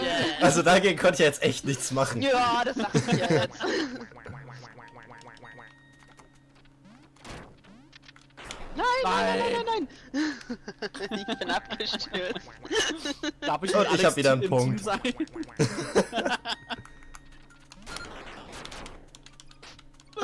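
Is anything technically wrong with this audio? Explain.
No, nothing technically wrong can be heard in this audio.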